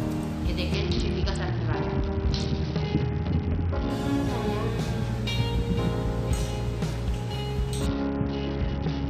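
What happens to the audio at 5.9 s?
Nothing goes wrong at 5.9 s; the audio plays through that point intact, with no dropout, click or distortion.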